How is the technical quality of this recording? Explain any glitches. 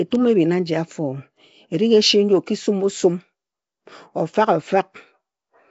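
The technical quality is poor, with two faults in this speech recording.

Across the whole clip, the audio sounds like it was likely run through Nellymoser compression, the old Flash microphone codec. It spends a fixed, small bit budget on short blocks, so quiet bands get no bits and are filled with synthetic noise. The damage is plainly audible as a rough, hissy fringe around the voice and a smeared, underwater quality. Nothing remains above 7.7 kHz, which fits a stream of about 32 kbps.

From 0.12 s to 5.69 s there are clock slip clicks, likely caused by two devices running on unsynchronised clocks that differ by roughly a tenth of a percent. Each time that drift adds up to a whole sample, a single sample is dropped or repeated. That happens about fifty times a second, a few hundred slips in all, and together they form a soft, steady rattle under the speech.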